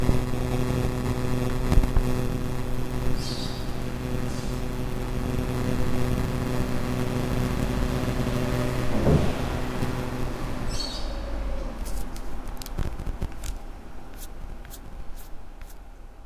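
Listening through these everyday sounds, nothing stood out as a technical fault at any point.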